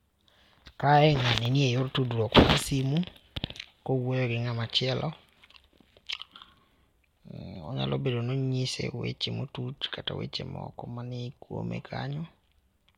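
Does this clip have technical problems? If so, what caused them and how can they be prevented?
No, no technical problems here.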